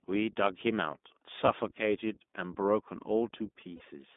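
Speech clip carried over the iLBC codec throughout. The line is confined to roughly 200 Hz to 3.6 kHz, so everything above is gone, and the per-frame excitation coding leaves the speech plainly rough and synthetic, consistent with the 15.2 kbps mode. Lost iLBC frames interrupt it twice, once at 1.46 to 1.50 s and once at 3.76 to 3.82 s, each heard as a short held, buzzy vowel where the decoder repeats the last pitch cycle with noise. The first gap fits one missing 20 ms frame and the second two frames, about 40 ms. Because each frame decodes independently, normal speech resumes immediately afterward.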